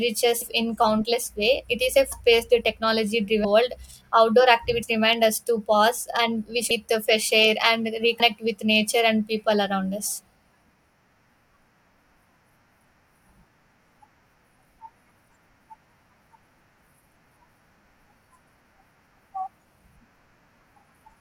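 Compressed frames skipped at 0.40, 2.11 (after "way it is a"), 3.43, 4.82 (between "world outdoor" and "remind us"), 6.70 and 8.19 s (between "the fresh air and" and "with nature and people") in this speech. Runs of 21.3 ms frames go missing, and each jump loses roughly a tenth to a third of a second.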